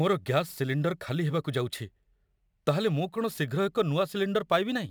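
Sample clock jitter runs through the whole speech clip, from start to finish. The converter's timing wanders by a few microseconds, so each sample lands slightly early or late, and the resulting error tracks how steeply the waveform is changing. The result is a fine hiss and graininess sitting around 30 dB below the speech, strongest on loud passages and bright sibilant sounds, and dropping away entirely in silence.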